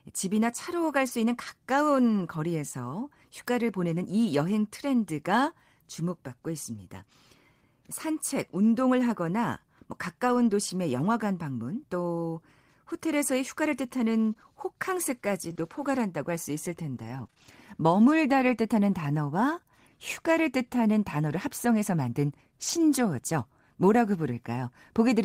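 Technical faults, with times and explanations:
1.07–1.09 s, 5.17–5.19 s, 10.29–10.51 s and 22.63–22.81 s, lost packet rebuilt from error correction: the speech continues without gaps, but each patch sounds rougher and noisier. The decoder played the low-bitrate backup copy of each lost packet, rebuilding 20 ms, 20 ms, 120 ms and 100 ms.
14.33–17.48 s, scattered short gaps: about five brief holes, none longer than about 20 ms, are filled by extending the preceding sound. They leave small ticks or smears in otherwise clear speech.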